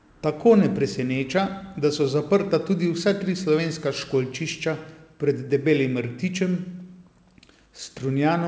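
Nothing stood out on listening to this speech, which comes through a call path whose codec leaves nothing above 8 kHz.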